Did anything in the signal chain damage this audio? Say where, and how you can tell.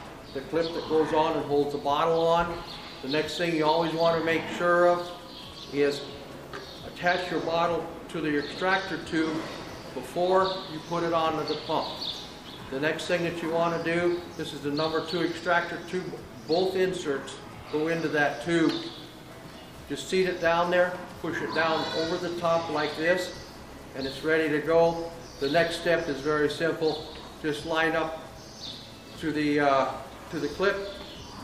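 No, nothing I can hear points to damage anywhere along the chain, so there's really no stage to blame here.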